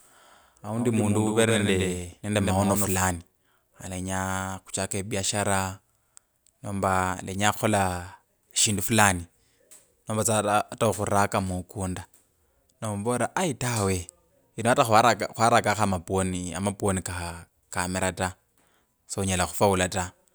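From the start to 2.98 s the speech carries a doubled audio track: a second full-band copy, around 100 ms late and about 5 dB quieter, likely from a slower capture path. Unlike room echo, it has no decay or colouring, and it cuts off abruptly.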